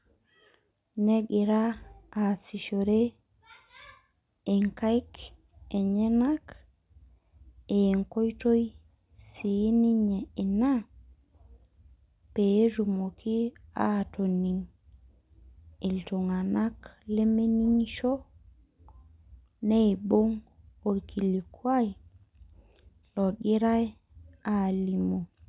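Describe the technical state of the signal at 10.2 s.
At 10.2 s the speech signal is intact, with no audible dropout, distortion or other technical fault at that moment.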